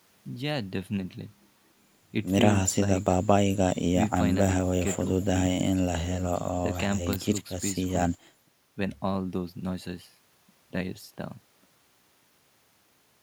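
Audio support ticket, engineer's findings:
No faults found in this speech clip. Nothing audible points to a failing component or path.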